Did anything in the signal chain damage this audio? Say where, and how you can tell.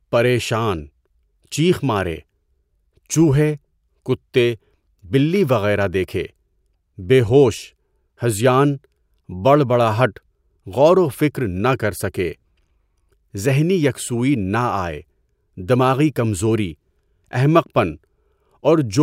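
No, nothing damaged this audio.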